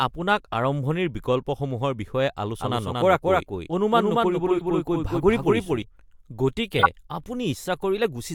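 Corrupt frame decoded at 0.53 s: damaged compressed data was played anyway, giving a brief glitch of misplaced energy peaking around -20 dBFS. A doubled audio track runs from 2.60 to 5.82 s. A dry, full-band copy about as loud as the original trails about 200 ms behind and starts and stops abruptly. Its likely cause is a second, slower capture path. Further corrupt frames decoded at 4.58 to 4.62 s and 6.79 to 6.87 s produce short glitches. The last is loudest, near -5 dBFS.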